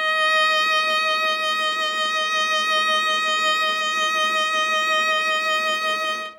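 A short music excerpt with no audible technical faults.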